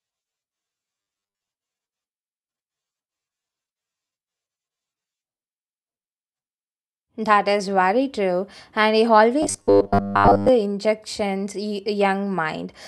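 Audio likely arrived too seldom, so short 10 ms buffers repeated: robotic sound from 1.02 to 1.49 s and 9.43 to 10.49 s, a rigid 100 Hz metallic buzz.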